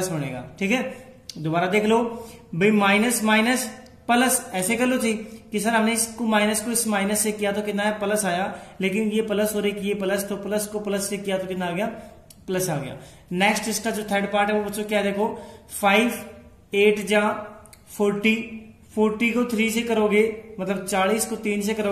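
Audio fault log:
No faults are present in this clip. No dropouts, glitches or other disruptions can be heard anywhere in the audio.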